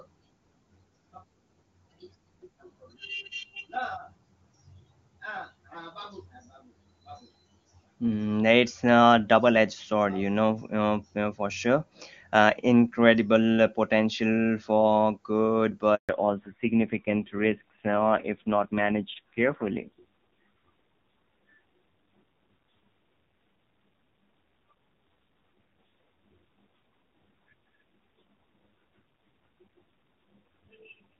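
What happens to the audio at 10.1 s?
Nothing goes wrong at 10.1 s: the speech is intact there, carried by the AMR wideband (HD Voice) codec at 23.85 kbit/s with little or no audible coding damage.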